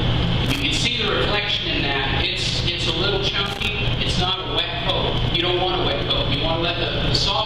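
Two short bursts of loose connector crackle, at 0.46 to 0.62 s and 3.46 to 3.72 s, where the sound gets chopped into irregular scratchy clicks. That's a worn or dirty contact briefly making and breaking as something shifts.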